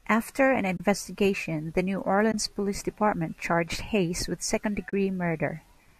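At 0.77 to 0.80 s, 2.32 to 2.34 s and 4.90 to 4.93 s the speech drops into short soft-edged silences of 30, 20 and 30 ms. This is AAC frame loss with muting: the decoder zeroes the missing frames, and its overlapping windows fade the sound out and back in. The sizes fit losing whole 10 ms frames, consistent with the likely low-delay AAC coding.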